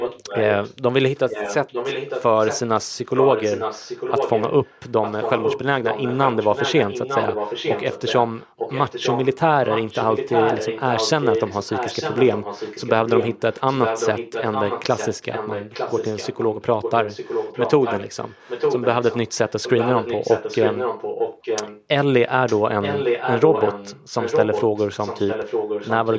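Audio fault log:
0.00–0.74 s, 1.15–21.84 s, 22.46–26.18 s: echo leak. A second, delayed copy of the speech runs under the main speech, trailing it by about 0.90 s and sitting roughly 5 dB below it, with short clean gaps at 0.74–1.15 s and 21.84–22.46 s. The likely cause is a far end playing the call on a loudspeaker whose echo canceller let part of that playback back into its microphone and return it. The call's band limit, with nothing above 8 kHz, applies to both copies.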